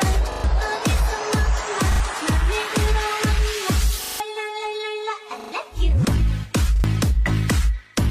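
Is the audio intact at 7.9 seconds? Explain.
Yes, at 7.9 seconds the audio plays through cleanly, with no dropout, click, distortion or other fault to be heard at that point.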